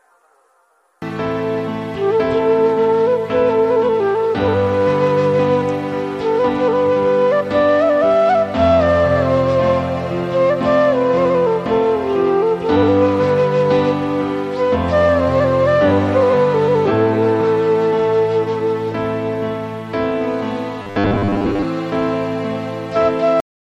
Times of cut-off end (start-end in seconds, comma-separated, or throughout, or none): 23.40-23.73